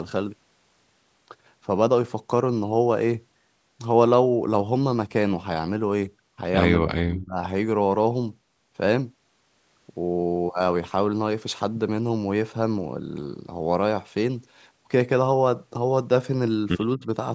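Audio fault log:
6.80–7.38 s and 16.96–17.03 s, speech suppressed in double talk: the speech dips by about 30 dB, then briefly by about 15 dB, likely an echo canceller turning down its own talker while the far side spoke. The waveform pinches inward there, and the spectrogram fades.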